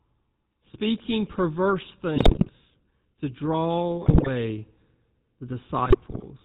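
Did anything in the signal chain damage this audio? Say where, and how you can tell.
Yes. At the codec stage, the whole clip passes through the GSM full-rate codec, consistent with its 13 kbps coder. Nothing survives above 4 kHz, and the coarse pulse-driven excitation gives the speech a plainly audible buzzy, gravelly roughness from start to finish.

On the radio link, GSM bit errors corrupt the decoder's filter, pitch and gain values at 2.16–2.51 s, 4.02–4.29 s and 5.86–6.24 s. Frames come out with warped spectra and sudden level jumps, so the speech breaks into squawks, pops and gargling, heaviest in the first two bursts.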